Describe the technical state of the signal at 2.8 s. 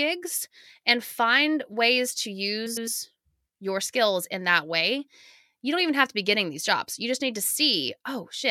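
At 2.8 s the signal is inside a frames out of order fault running from 2.66 to 2.88 s, just after "and find ways to". Two neighbouring blocks, each about 105 ms and pointing to four frames, play in swapped order. The result is a garbled flutter. No time is lost.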